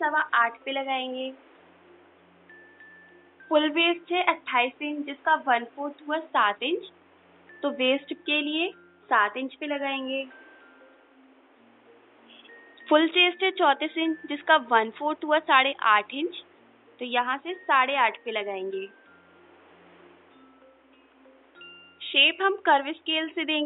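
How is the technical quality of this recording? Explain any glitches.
No technical faults are audible.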